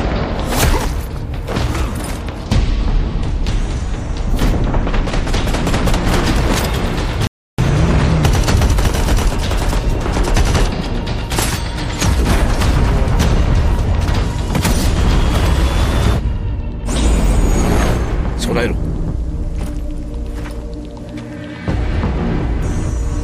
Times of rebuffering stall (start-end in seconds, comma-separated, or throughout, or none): 7.27-7.58